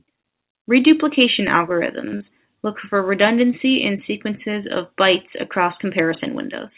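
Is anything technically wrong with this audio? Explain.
Yes, there are two small glitches close together in this speech, both right before "look for redundancy in", and both come through a narrowband call path that cuts everything above 4 kHz, which fits G.711 mu-law.

From 2.08 to 2.15 s there's a short stall from a late packet. The jitter buffer ran dry, so the receiver held the last sound for about 47 ms until the packet showed up, then carried on. Nothing's lost, but that moment drags with a faint buzz or dip.

Right after, from 2.17 to 2.22 s, there's a short concealed packet loss. About 40 ms of audio never arrived, and the receiver patched it by extending the previous sound before blending back. You hear a brief smear or wobble there.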